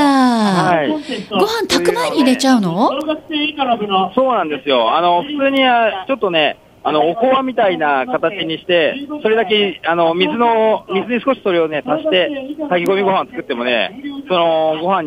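A bit error spike lands at 3.01 s, again at 5.57 s and at 12.86 s, each a single flipped bit in a stored or transmitted sample value. The affected value leaps by a power of two to a peak of about -7 dBFS, then snaps straight back on the next sample, with the last event spanning roughly two samples. Each one is heard as an isolated, sharp, broadband tick that has no relation to the surrounding audio.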